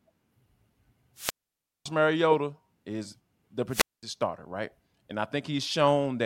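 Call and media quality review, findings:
Hiss rises into a near-silent gap at 1.15–1.88 s (0.56 s mute) and 3.69–4.03 s, after "is the", back at "starter right" (0.21 s). Wireless microphone squelch dropout: FM radio link fades, and the receiver squelch mutes the output.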